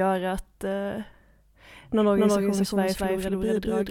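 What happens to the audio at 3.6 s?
At 3.6 s the audio sits inside a doubled audio track that begins abruptly at 2.0 s and runs to the end of the clip. The likely cause is the same signal reaching the mix twice, once directly and again by a slower path. The late copy trails by about a fifth of a second at roughly equal level, full-band and with no decay or room colour, so every sound is followed by a hard, flat repeat.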